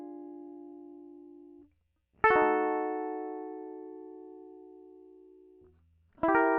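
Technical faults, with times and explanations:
No technical faults can be heard in this music.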